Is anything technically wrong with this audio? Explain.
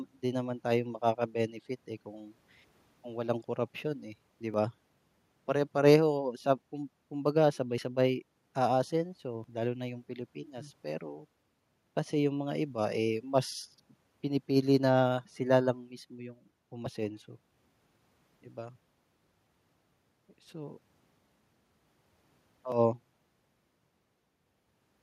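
Yes. The speech jumps abruptly at 4.54, 7.78, 9.44 and 22.72 s. Each jump has the sound skipping ahead, losing roughly 20 ms at the first two and around 70 ms at the last two. This is likely a dropped buffer (overrun): captured samples were overwritten before being read, and the surrounding audio spliced together.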